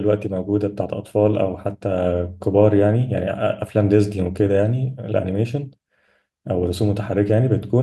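Listening through the speech recording, nothing stood out as a technical problem.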